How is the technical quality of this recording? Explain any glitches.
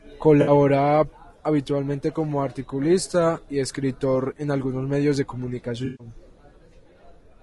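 The recording has audible coding damage throughout and two brief concealment glitches.

Throughout, the speech sounds rough and grainy, with noise between harmonics and a thin top band, likely from low-delay AAC compression (AAC-ELD) at roughly 32 kbps. Unlike a dropout, it never stops.

AAC frame loss with concealment occurs at 0.41 to 0.51 s (60 ms) and 5.85 to 6.07 s (140 ms). The decoder fills lost frames from earlier spectrum, causing a smeared, noisy or phasey patch instead of a click or hard gap.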